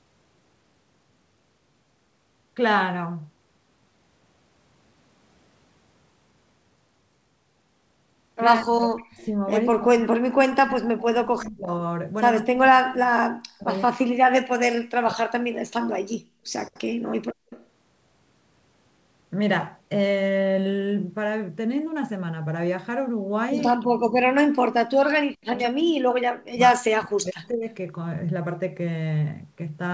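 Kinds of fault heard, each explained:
Speech suppressed in double talk: The talker's speech sinks by as much as about 40 dB at 8.6–9.47 s, 9.7–11.67 s, 12.42–13.68 s, 13.88–15.44 s and 23.74–27.65 s. The last stretch is the longest, with around four seconds pushed down. The likely cause is that both ends spoke at once and the echo canceller could not tell the local talker from loudspeaker echo, so it turned everything down. Unlike gating, the speech itself is cut, over long spans.
Background gated by the echo canceller: From 17.31 to 17.5 s, only the room sound drops out. It falls by about 31 dB for roughly a fifth of a second, then returns. The canceller clamped the microphone hard while the far-end loudspeaker was playing and released it straight after. What separates it from double-talk suppression is that no speech is being cut, only the room tone, and the dip is brief.
Echo leak: Right after the gate lifts, from 17.5 to 17.66 s, a faint delayed copy of the voice the far end played on its loudspeaker comes through. 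It is about 25 dB below the speech and lags by 187 ms. Likely the far end's echo canceller failed to remove all of what its microphone picked up from its own loudspeaker. It differs from room reverberation because it is a distinct, separate repeat with a clear delay, not a smooth decay.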